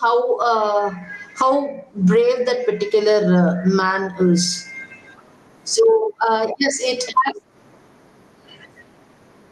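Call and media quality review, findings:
Gain pumping, throughout the speech. Gain ducks by around 20 dB under each loud syllable; levels squashed, dynamics flattened. Likely cause: mic gain set far too high, with a fast limiter/compressor clamping each peak. Call path itself audible only as codec texture and a top end ending near 12 kHz, consistent with Opus at roughly 32 kbps.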